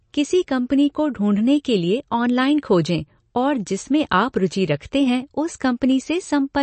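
Throughout, a bit-starved encoder has likely discarded detail, the mark of MP3 compression at a low bitrate, consistent with about 37 kbps. Nothing remains above 8.3 kHz, dulling the speech, and weak frequency lines flicker between frames, giving a plainly audible watery swirl.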